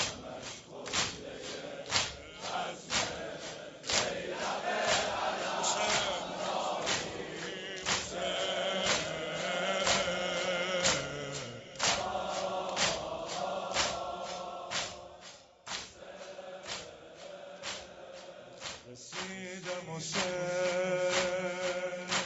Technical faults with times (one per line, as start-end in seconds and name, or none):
none